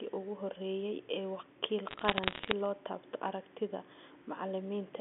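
From 1.89 to 2.51 s, after "ugu horreeyay ee wakiil" and before "loo taabto aragtida", bit errors on a digital phone line break into the speech. Roughly one bit in two hundred was flipped on the G.711 line. Each hit corrupts one sample, and hits on high bits give sharp ticks heard as crackle.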